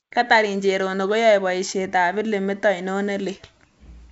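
No technical faults are present: the speech carries the wideband telephone character of G.722 coding, with its bandwidth reaching to about 7 kHz and the upper band's faint hiss at the level expected of the full 64 kbit/s mode.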